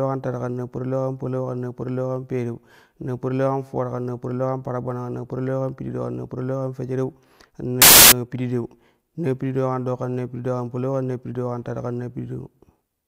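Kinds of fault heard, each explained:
Samples built from the wrong bytes: the decoder assembled each sample from misaligned or swapped bytes, so rapidly changing low-order bits became the dominant part of every value. The speech gives way to loud, harsh broadband noise from 7.82 to 8.12 s, right after "parilau kan fejereu kan".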